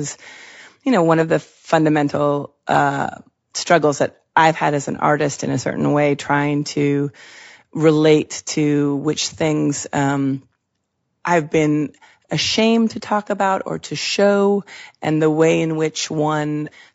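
From start to finish the speech sounds rough and grainy, with noise filling the gaps between harmonics, which points to low-delay AAC compression as the likely cause. Its short frames resolve pitch poorly, unlike plain bandwidth loss, and the damage fits roughly 32 kbps.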